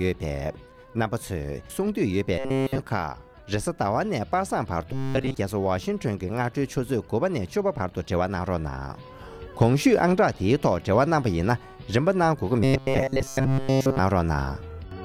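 Audio likely arrived too seldom, so playback filled the gaps by looping a short buffer of about 7.5 ms. That produces robotic sound from repeated short buffers, a rigid 134 Hz metallic buzz: almost entirely repeated at 2.38 to 2.79 s and 4.93 to 5.34 s, and mostly repeated at 12.64 to 13.99 s.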